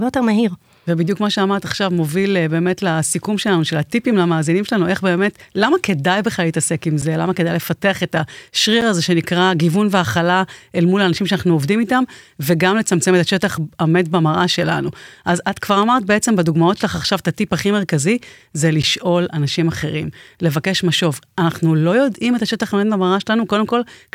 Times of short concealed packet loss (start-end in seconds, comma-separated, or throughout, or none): none